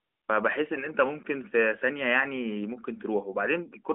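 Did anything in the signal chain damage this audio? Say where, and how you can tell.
No, nothing in the chain damaged this speech. It comes through an AMR narrowband mobile codec, with nothing above about 3.8 kHz, a telephone band of roughly 250 Hz to 3.5 kHz, and only the light coding texture that fits the 12.2 kbps mode.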